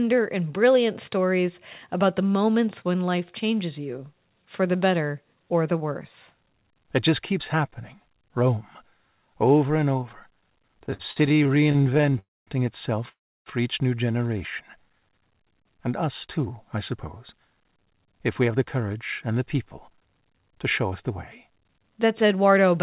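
After "and over", from 10.8 to 12.17 s, the audio hits repeated stalls, a stutter. Packets kept arriving late, so the jitter buffer ran dry again and again. There are 30 short gaps, the longest 50 ms. Each is filled by stretching the last sound, about 426 ms in all. That is roughly a third of the span. Nothing is lost. The sound drags and stutters.

Right after, two call audio freezes follow. The first runs from 12.19 to 12.49 s. The second runs from 13.09 to 13.48 s, ending just before "each new". In each, the last sound is held as a brief buzz or hiss that fades to silence. The silent part lasts 220 ms in the first and 320 ms in the second. The likely cause is packets held up in transit, emptying the jitter buffer. Playback then resumes where it stopped. Gaps of 281 ms and 373 ms are inserted, and nothing is missing.

From 16.05 to 21.48 s, a jitter buffer speed-up sets in. The buffer had built up extra delay, and the receiver trimmed it away. 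It cut many tiny slices, each a pitch period or a few long, about 0.4 s in total. Playback runs at 107 percent with unchanged pitch. The speech sounds slightly rushed. Throughout, the narrowband call path passes nothing above 4 kHz, which fits a G.711 call.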